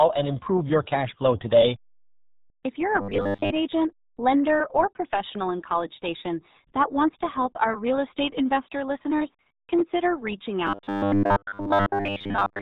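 RealAudio 14.4 codec damage runs throughout. The speech sits inside a band that stops below 4 kHz, which fits an 8 kbit/s dial-up codec, so it sounds muffled and gargly, with heavy artefacts.

Robotic sound from repeated short buffers appears from 3.01 to 3.51 s and again from 10.67 to 12.61 s. Audio likely arrived too seldom, so a short slice was looped while most of the real signal was skipped. The result is a rigid metallic buzz at 100 Hz, which points to a 10 ms buffer.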